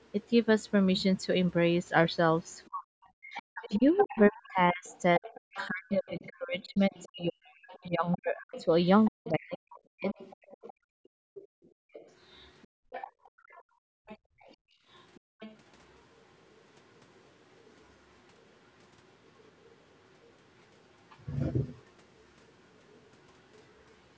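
From 2.45 to 15.57 s, a second voice sits under the main talker. This is the other side's voice leaking through, at roughly 20 dB below the speech. The likely cause is the other side playing on a loudspeaker, with the echo canceller failing to remove it from the microphone. The leaked voice is faint, a layer behind the talker.

Inside that stretch, from 2.7 to 10.2 s, the talker's own speech is suppressed in double talk. Both sides speak at once here. The echo canceller likely cannot tell its talker from the echo, so it pulls both down. The talker's voice sinks in pieces, by as much as about 40 dB at worst. Around five seconds of speech are affected in total.

From 10.73 to 15.4 s, the background is gated by the echo canceller. While the loudspeaker plays, the canceller clamps the microphone hard. The room sound falls away, by up to about 39 dB. Then it comes back when the canceller releases. 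The gaps add up to about three seconds.

The leak returns three more times, much quieter, at roughly 40 dB below the speech. These come at 16.63 to 17.75 s, 19.26 to 20.32 s, and 21.76 to 23.72 s. Each is a brief, faint trace of the far voice. All of this passes through the call's microphone path, which carries nothing above 8 kHz.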